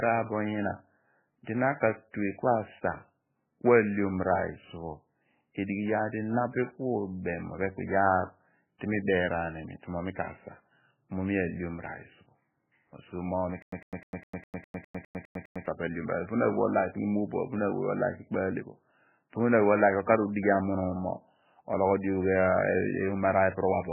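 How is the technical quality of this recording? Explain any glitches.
Technical quality is poor: the speech is heavily band-limited and smeared throughout, and there is a stutter in the middle.

Throughout, nothing is present above 3 kHz, and the speech sounds watery and swirly. This is likely heavy MP3 compression at a very low bitrate, around 8 kbps, with the treble cut off and weak frequency lines dropping in and out. On a spectrogram it shows as a hard ceiling at 3 kHz with flickering, patchy energy below it.

From 13.62 to 15.66 s, just after "so mo mi", there is a stutter with silent gaps. A 103 ms burst plays ten times, each followed by about 100 ms of digital silence, so it repeats every 204 ms. A stalled player or stream replaying its last fragment is the likely cause. The waveform shows identical short blocks separated by flat silent stretches.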